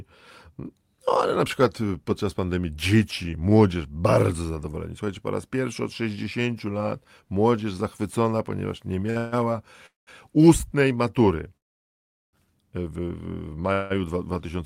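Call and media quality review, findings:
Short stall from a late packet, 9.10–9.18 s, right after "młodzież zachwycona ponieważ nie": speech sound held about 50 ms with slight buzz or dip. Jitter buffer underrun; receiver stretched the last frame until the packet arrived, then resumed in place. Nothing lost; playout delay grows 52 ms.

Call audio freeze, four events, likely caused by packets held up in transit draining the jitter buffer. 9.18–9.34 s: follows the stall directly, about 150 ms continuation of the last sound, no silence. 9.86–10.09 s: about 210 ms, fades to silence for 160 ms. 11.57–12.35 s: 0.76 s gap, almost entirely silent. 13.73–13.92 s: about 170 ms hold, no silence. Speech resumes where it stopped each time; nothing missing, gaps inserted.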